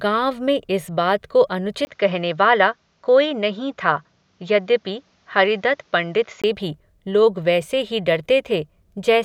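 Just after "में इस बात को", at 1.85 s, a brief gap of about 20 ms opens and the speech turns duller, with nothing above 7.3 kHz, a faint new background noise roughly 45 dB below the voice, and the level barely changing. At 6.44 s the full band returns before "भी लोग वैसे ही". This is likely an input switched to a poorer device, a narrower-band microphone with its own tone and noise, and then switched back.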